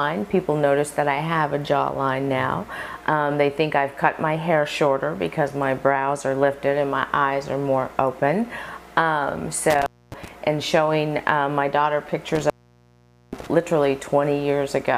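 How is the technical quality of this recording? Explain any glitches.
Two dropouts from intermittent contact. From 9.70 to 10.28 s the signal opens for 0.26 s. From 12.35 to 13.47 s it opens for 0.83 s. A loose cable or plug briefly breaks the circuit. Sound vanishes, crackling at each edge, with faint hiss between.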